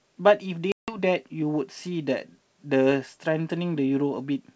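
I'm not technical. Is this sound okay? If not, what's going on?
No. At 0.72 s the speech drops into a sharp-edged silence, and sound returns by 0.98 s. This is packet loss on an ADPCM call: about 160 ms of audio, several small chunks of data, never arrived and were filled with nothing. The wideband telephone coding keeps a running estimate of how loud the signal is, and the gap knocks that estimate off, so the first moments after the hole can come back at the wrong level or with a brief click.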